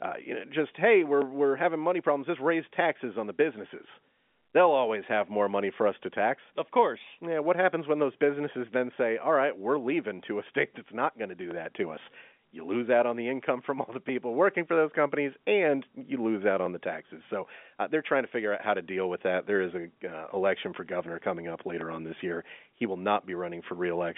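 A speech recording carried over a G.711 telephone line, with the band limited to about 3.7 kHz, has a short click every 2.58 s from 1.22 s to 21.81 s, around ten in all. These are likely clock drift buffer slips: two mismatched clocks, a few hundred ppm apart, force a small block of samples to be dropped or repeated each cycle.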